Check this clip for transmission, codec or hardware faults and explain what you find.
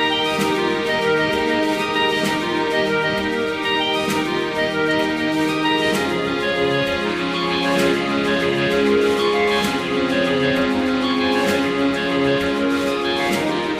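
One fault is present: periodic clock jitter from 7.07 s to the end at 13.80 s. Interference near 100 Hz wobbles the converter clock, adding sidebands around every component, strongest on high frequencies. This gives a rough, metallic edge that vanishes in silence, unlike mains hum, which persists through quiet passages.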